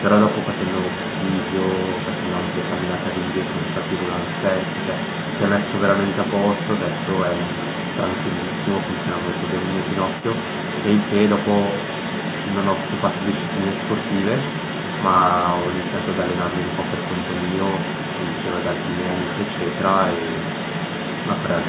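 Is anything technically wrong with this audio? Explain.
Yes. Throughout, from 0 to 21.7 s, the other side's voice leaks through beneath the speech, only a few decibels quieter. Likely the echo canceller left far-end audio from the loudspeaker in the microphone signal. It sounds like a second voice. On a spectrogram, a second set of harmonics overlaps the main one, all below the 4 kHz ceiling of the G.711 call path.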